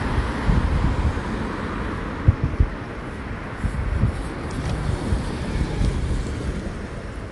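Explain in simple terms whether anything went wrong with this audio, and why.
Something did go wrong, for the whole clip. The audio sounds watery and swirly, and nothing is heard above about 11.3 kHz, so the treble is dull. This is likely MP3 compression squeezed too hard, dropping quiet detail that flickers in and out.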